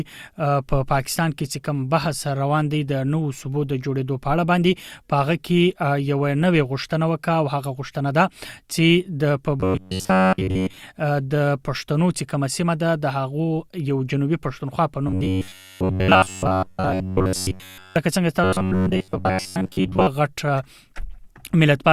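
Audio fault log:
9.60–10.77 s, 15.08–17.96 s, 18.44–20.07 s: robotic sound from repeated short buffers. The sound becomes a rigid metallic buzz at 93.8 Hz, loosely following the original, with most real audio skipped. Likely cause: late audio, gaps filled by looping a roughly 10.7 ms block.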